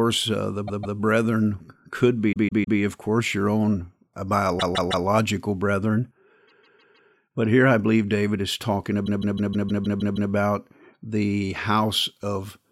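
Repeated frames stutter the speech at 0.67, 2.31, 4.59, 6.47 and 9.05 s. Each time the same block of about 157 ms, starting after "uh the" at 0.67 s and ending before "of course your own" at 2.78 s, replays two, three, three, four and finally eight extra times. The last event adds about 1.25 s. The identical repeating block marks a duplicated stretch of compressed frames rather than a dropout.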